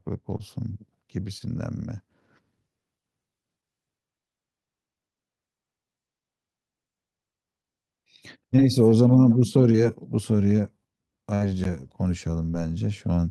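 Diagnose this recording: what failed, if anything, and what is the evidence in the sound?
The network dropped single packets, about 20 ms each, and the receiver's concealment covered them: brief smears or wobbles in the speech at 0.37–0.43, 1.38–1.42, 8.56–8.60, 9.72–9.77 and 12.50–12.55 s. This is short concealed packet loss, with the last sound extended to fill each hole.

A burst of packet loss hit at 11.35–11.42 s. About 60 ms of speech never arrived in time, and the decoder stretched the preceding sound and faded it out. It is heard as a held buzz or fading hiss before the speech resumes further on, with that stretch missing.

At playback or in storage, the audio is split into 4-second chunks with a gap between chunks. At 11.64 s, about 13 ms of silence cuts into the speech, probably from padding or a late-starting chunk. No speech is lost there, only interrupted.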